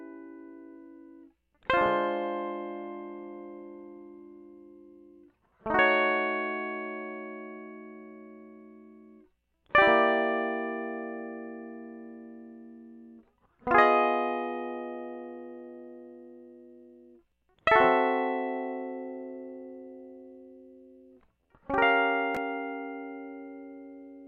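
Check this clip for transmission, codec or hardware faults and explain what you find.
No faults turn up anywhere in this music.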